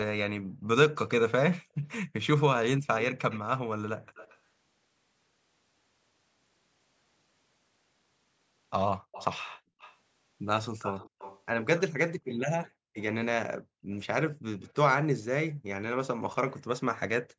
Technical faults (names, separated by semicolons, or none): background gated by the echo canceller; echo leak